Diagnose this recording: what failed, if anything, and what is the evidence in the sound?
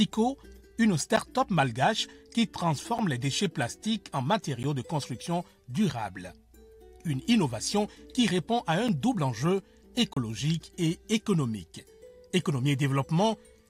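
The audio drops to digital silence five times, at 1.16, 2.98, 4.63 and 8.88 s and from 10.13 to 10.17 s. This points to the driver or buffer stage. The output buffer went unfilled in time, so zeros were written instead. The first and third gaps each last 10.67 ms, which fits a 512-sample buffer. The cuts have no fade. On a waveform each gap is a near-flat line. On a spectrogram it shows as a blank column with thin broadband streaks at its edges.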